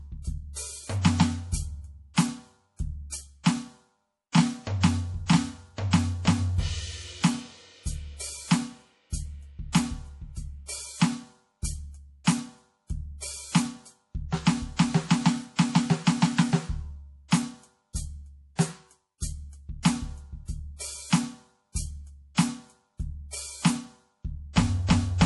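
All the way through, the music has a watery, swirly quality and nothing above 11.5 kHz, which is likely MP3 compression at a low bitrate, something like 48 kbps. The encoder runs short of bits, cuts the treble and lets weak detail flicker on and off between frames. At 14.76 to 14.79 s there's a pre-echo: a short hiss of about 26 ms creeps in just ahead of a sharp attack. The block's quantisation noise, sized for the loud hit, has spread into the quiet just before it, so the attack sounds softened.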